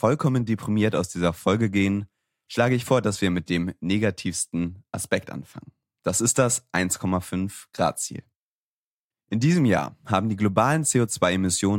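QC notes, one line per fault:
No faults found.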